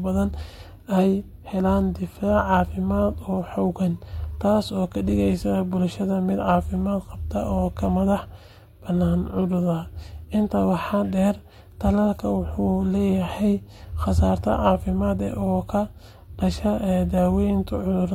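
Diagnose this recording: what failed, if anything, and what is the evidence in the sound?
Nothing failed here: the speech comes across without a click, dropout, glitch or other fault at any point in the recording.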